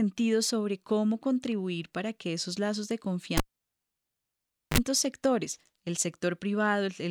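At 3.37 s the speech is cut by a cable pulled and plugged in. A sharp pop marks the moment the live lead leaves the socket, and the waveform collapses to near silence for about 1.36 s. As the plug goes back, the tip touches first, giving a 42 ms burst of 50 Hz mains buzz, seen as a stack of evenly spaced harmonic lines on the spectrogram. A second pop spike at 4.78 s brings the speech back.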